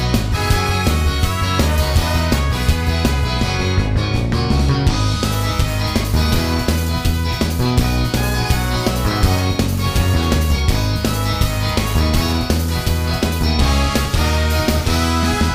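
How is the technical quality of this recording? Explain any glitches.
The technical quality of this recording is sound, with no glitches to explain.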